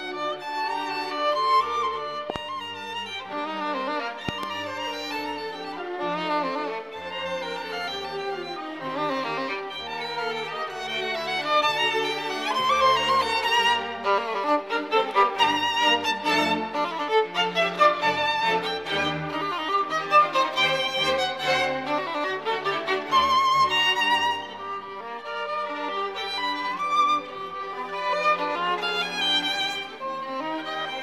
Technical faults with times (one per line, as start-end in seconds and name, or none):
2.30-2.38 loud pop
4.29-4.45 loud pop